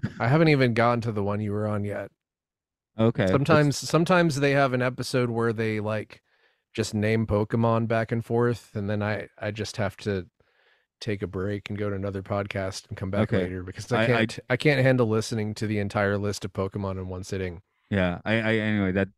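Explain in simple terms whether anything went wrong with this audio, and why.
Nothing went wrong: no technical fault turns up anywhere in the speech recording.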